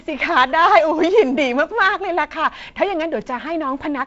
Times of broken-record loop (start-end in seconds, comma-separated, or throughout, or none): none